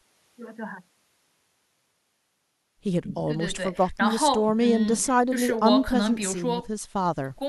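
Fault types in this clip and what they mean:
Nothing to list here: the speech comes across without any audible technical fault.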